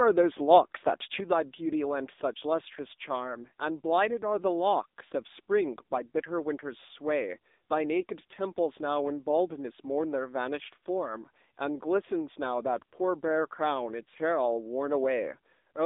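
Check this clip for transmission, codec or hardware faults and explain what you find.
One fault runs through the whole clip: AMR narrowband mobile codec. The band sits near 250 Hz to 3.7 kHz, and the vocal-tract coding at a rate that points to about 8 kbps gives plainly audible buzzy, synthetic speech. A simple telephone filter would sound muffled but stay clean.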